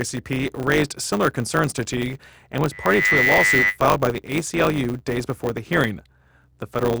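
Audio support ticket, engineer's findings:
Block size mismatch (truncated), throughout: 100 Hz buzz, speech about 1.07x fast at normal pitch. The writer's output fits 512-sample blocks, and the reader takes fewer and drops each tail. Spectrogram: evenly spaced vertical striations.

Loudspeaker feedback squeal, 2.71–3.78 s: single 2 kHz tone swelling over a fraction of a second to a few dB above the speech. Mic-to-speaker loop gain exceeds one. Spectrogram: bright horizontal line.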